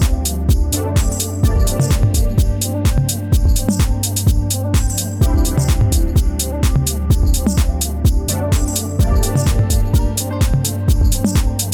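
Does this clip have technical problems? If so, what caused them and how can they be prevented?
No, nothing technical stands out here, so there's no problem to trace and nothing that needs preventing.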